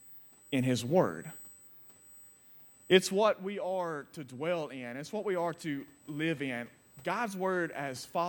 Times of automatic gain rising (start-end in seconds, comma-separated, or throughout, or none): 3.40-8.10